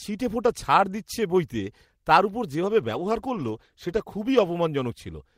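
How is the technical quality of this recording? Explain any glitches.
One fault stands out. From 2.8 to 4.95 s, just after "বইতে তার ওপর যেভাবে", a call bitrate drop makes the speech coarser and duller, at its worst for about 1.3 s, consistent with the encoder falling from about 32 to 18 kbps.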